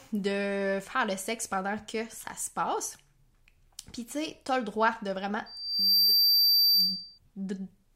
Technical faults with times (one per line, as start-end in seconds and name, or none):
5.46-7.18 loudspeaker feedback squeal